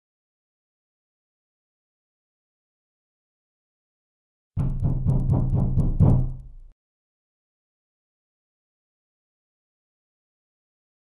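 Throughout, faint ticks repeat at 10 per second under the signal: the resampler restarted on every block, so each 100 ms block edge carries a small conversion error.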